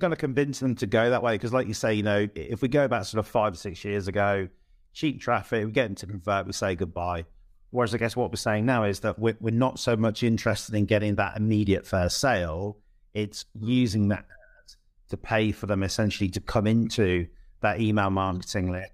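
Nothing in this speech recording stands out as a technical fault; it all sounds the way it should, with nothing to flag.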